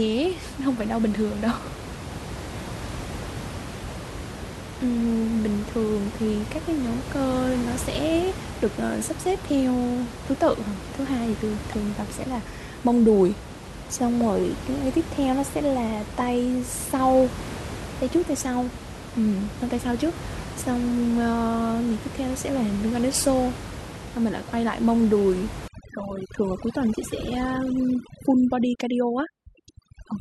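From 25.68 s to the end at 30.20 s, overdone noise removal sets in. Up to that point the room noise sits about 11 dB below the speech. Here a noise reducer pushed too hard cuts individual frequency bands whenever they approach its noise estimate, taking quiet parts of the speech with them. The background drops and breaks up into twinkling specks. A simple noise gate would mute everything at once, not leave scattered tonal fragments.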